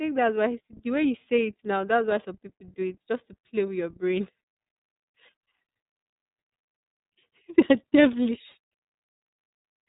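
The whole clip has gone through the iLBC codec: nothing above about 3.8 kHz survives, and the speech sounds plainly rough and synthetic, which fits 30 ms frames at around 13 kbps.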